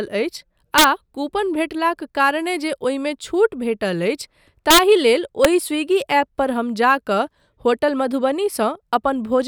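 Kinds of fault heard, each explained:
Integer overflow: speech peaks go about 1 dB past the largest integer value and wrap to the opposite sign instead of being limited. This gives violent cracks, sharper than clipping, at 0.78–0.84 s, 4.71–4.79 s and 5.45 s, just before "स्विगी ऐप पर हम".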